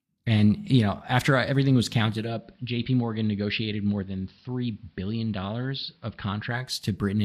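Right after "know after everything was", at 2.04 s, this speech shows a digital radio blending to analogue: the receiver lost its digital stream and cross-faded over about 450 ms to the station's AM broadcast, staying there until 6.91 s. The sound drops about 4 dB and turns dull and hissy. On a spectrogram, the upper treble thins out, with a faint noise floor roughly 40 dB down. The waveform shows a slightly lower envelope.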